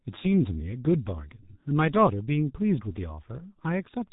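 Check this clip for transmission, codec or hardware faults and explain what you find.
The speech sounds muffled and hoarse from start to finish, with consonants smeared into the vowels and no brightness above 3.8 kHz. That is the signature of the G.723.1 codec, an early internet-telephony coder. It squeezes speech into 30 ms frames, and the heavy damage here points to its roughly 6 kbit/s mode. It rebuilds the voice from a coarse model that updates too slowly to follow quick consonant changes, and it discards the upper band entirely.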